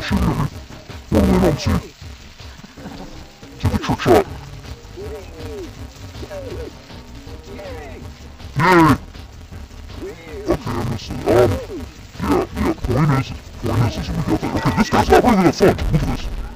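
From start to finish, the sound is dull and robotic, with a steady buzz at 172 Hz. This is interleaved audio read as planar. Alternating left and right samples get split into halves. The 5.8 ms blocks fit a 256-sample block size. They are too short for a clear octave drop.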